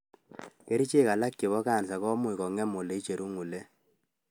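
No faults in this speech.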